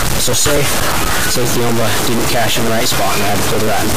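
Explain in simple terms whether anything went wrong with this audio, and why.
A distortion runs through the whole clip, and even quiet gaps are filled with a gritty noise. The likely cause is a stuck bit, where one digital bit stays fixed at 0 or 1. Unlike ordinary clipping, this grit stays even when the sound is soft.

There are also periodic USB or driver dropouts: from 0.08 to 3.80 s, a tiny slice of about a millisecond is skipped every 0.124 s, around thirty times. Each one makes a tick or pop. Random clicks would be scattered, but these come at a steady beat.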